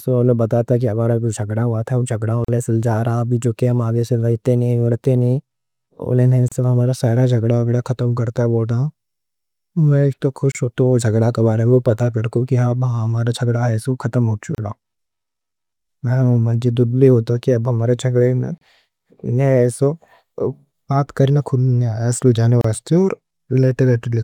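Speech with brief dropouts every 4 s, at 2.45, 6.48, 10.52 (after "ایک تو"), 14.55 (after "ختم ہو"), 18.58 and 22.61 s. These are gaps at joins of encoded pieces: roughly 32 to 39 ms silences from encoder delay and end padding left untrimmed when separately encoded pieces were joined.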